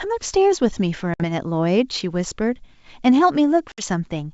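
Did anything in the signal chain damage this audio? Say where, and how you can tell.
Yes. Packet loss on an ADPCM call is audible at the network stage, from 1.14 to 1.23 s and again from 3.72 to 3.85 s. Each gap is a hard-edged silence of about 60 ms, roughly three packets' worth, cut into otherwise wideband G.722-sounding speech. After each hole the speech comes back with brief distortion. The receiver's adaptive predictor and step size lost sync with the sender's and take some tens of milliseconds to recover.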